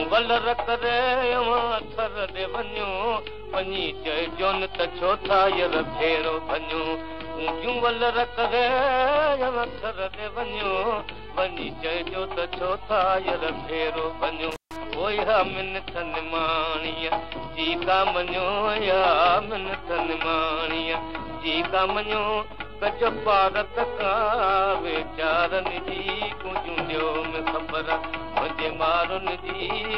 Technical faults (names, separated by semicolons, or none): intermittent contact